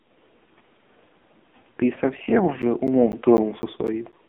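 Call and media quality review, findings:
AMR narrowband mobile codec, throughout: hard ceiling at 3.6 kHz, line band about 200 Hz to 3.5 kHz, heavy buzzy, synthetic coloration from the pulse-driven vocal-tract model on 8 kHz sampling. Damage level fits a low AMR-NB mode near 5.9 kbps.

Periodic USB or driver dropouts, 2.62 to 4.13 s: regular ticks every 0.25 s, about seven in all, each roughly 10 ms of audio replaced by silence. A background task is stalling the USB bus or audio driver at a fixed interval.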